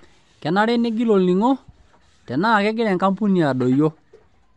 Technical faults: Bluetooth LC3 compression

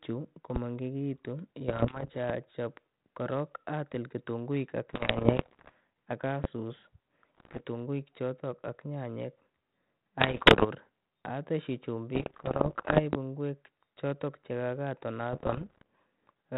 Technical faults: loud pop; bit errors on an ADPCM link

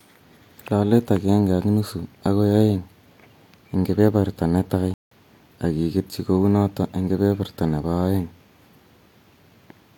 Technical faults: playback stall

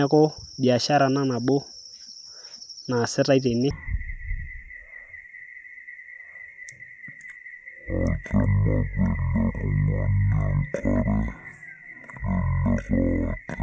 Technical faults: wrong sample rate

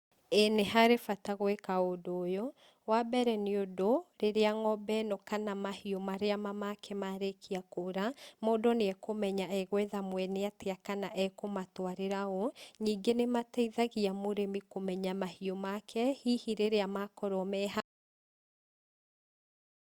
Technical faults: audio dropout to silence

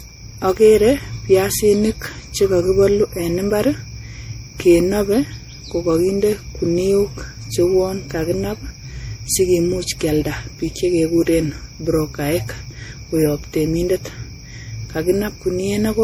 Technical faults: generation loss

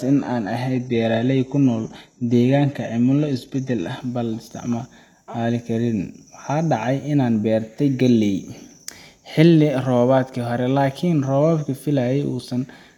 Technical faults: adaptive stream starting at a low bitrate

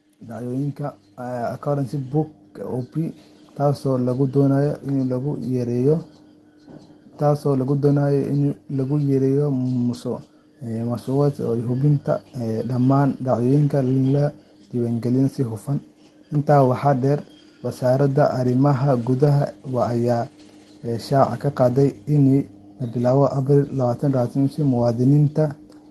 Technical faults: automatic gain rising; lost packet rebuilt from error correction

